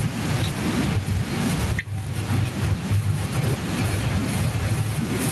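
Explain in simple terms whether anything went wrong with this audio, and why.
Gain pumping runs through the whole recording, and the speech sounds squashed. This likely comes from the microphone level being set far too high, with an automatic limiter repeatedly pulling it back down.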